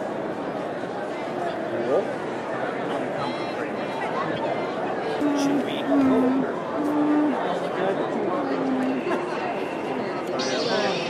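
A corrupt frame decoded at 4.35 to 4.39 s: damaged bits in a couple of compressed frames were decoded regardless, so misread gains and codes threw energy into the wrong frequencies for about 44 ms. It sounds like a brief chirp, squeak, blip or burst of noise, peaking around -20 dBFS.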